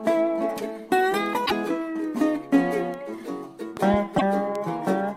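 The audio carries three bit error spikes, at 1.26, 2.94 and 4.55 s, each a single bare tick lasting one, two and three samples respectively. A flipped bit makes the value leap by a power of two and snap straight back, so the tick is broadband and does not ring or disturb the sound around it. Damaged data in a compressed stream appears at 1.43 to 1.52 s and again at 4.14 to 4.22 s as short glitches. Unlike the ticks, these replace the sound for tens of milliseconds while the decoder loses sync and hunts for the next frame header. Between 3.77 and 3.96 s come two loud pops, standing roughly 10 dB above the sound, which continues unbroken beneath them. They were likely caused by a voltage step from a plug, switch or static discharge.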